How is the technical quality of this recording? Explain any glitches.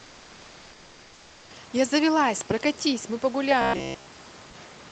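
The recording has two faults: a synthetic background at the start and a robotic buzz near the end, both heard through a call codec that cuts the top end at about 8 kHz.

From 0.0 to 1.50 s, comfort noise stands in for the background: a steady, featureless hiss about 1 dB quieter than the real room noise, likely from the sender pausing transmission. Unlike a dropout, it never goes silent.

From 3.62 to 4.10 s, a robotic sound from repeated short buffers turns the speech into a metallic 66.8 Hz buzz. This likely comes from about 15 ms chunks being looped in place of fresh audio, which imposes a fixed-rate buzz in a way jitter warble never does.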